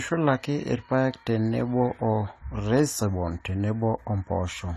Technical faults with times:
0.00-4.76 AAC compression

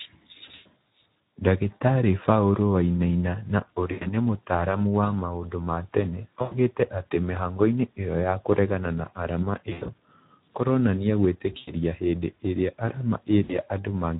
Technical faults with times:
0.00-14.19 Speex codec
0.45-0.66 VoIP packet loss concealed by the speech codec
3.91-4.06 VoIP packet loss concealed by the speech codec
6.41-6.59 VoIP packet loss concealed by the speech codec
9.69-9.92 VoIP packet loss concealed by the speech codec
11.57-11.72 VoIP packet loss concealed by the speech codec
13.43-13.57 VoIP packet loss concealed by the speech codec

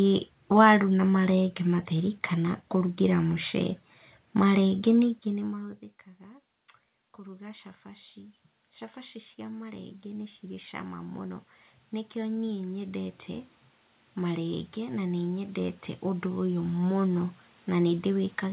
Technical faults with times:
7.15-8.44 automatic gain rising
9.36-11.49 automatic gain rising
14.15-18.53 automatic gain rising

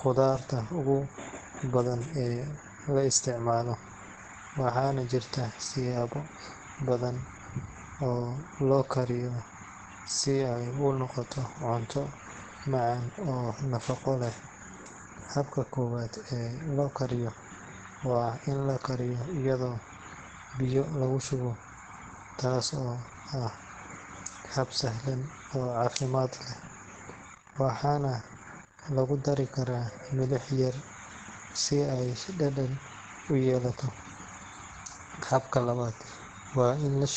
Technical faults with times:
0.00-37.16 Opus compression

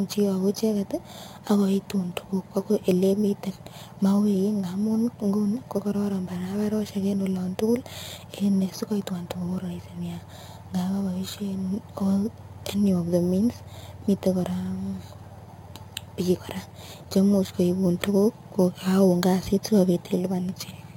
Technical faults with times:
0.00-20.96 imaging from sample-and-hold upsampling

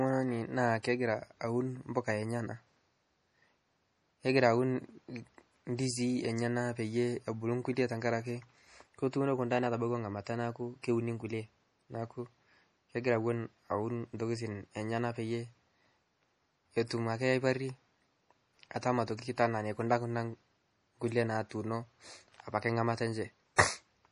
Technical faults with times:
0.00-24.11 MP3 compression
0.83 pre-echo
19.17 pre-echo
23.56-23.58 pre-echo

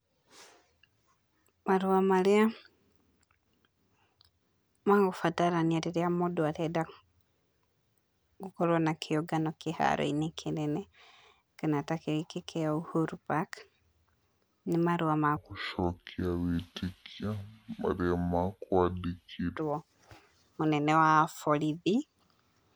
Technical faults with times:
15.37-19.57 section at the wrong speed

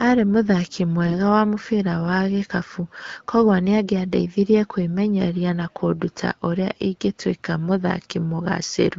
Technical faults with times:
1.06-1.18 AMR bit errors

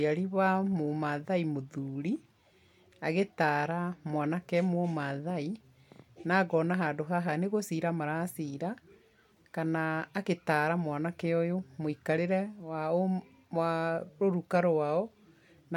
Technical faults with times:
none

